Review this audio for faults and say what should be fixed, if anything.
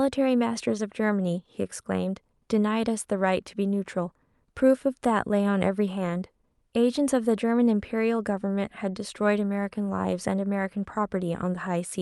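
No faults; nothing needs fixing.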